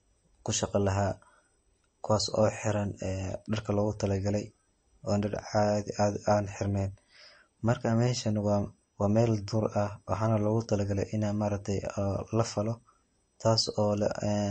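Throughout the speech, a bit-starved encoder, likely MP3 compression at a rate consistent with about 34 kbps, has removed everything above 8.3 kHz and dropped weak frequency lines frame to frame. The top end sounds dull, s sounds turn watery and swirly, and consonant attacks smear.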